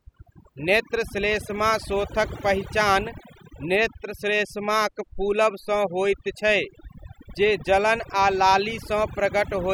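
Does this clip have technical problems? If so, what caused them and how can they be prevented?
Yes. Throughout the speech, the background drops to an unnaturally dead hush dotted with twinkling specks. This is overdone noise removal: a noise reduction stage set far too aggressively clamped down on every frequency band that resembled its noise estimate, stripping away quieter parts of the voice along with the noise. Prevent it by applying gentler reduction settings and checking the result by ear.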